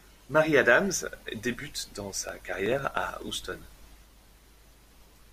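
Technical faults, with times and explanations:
2.29–5.27 s: periodic USB or driver dropouts. About 2 ms is skipped every 62 ms, so regular ticks run under the speech. Evenly spaced bus or driver stalls cause them.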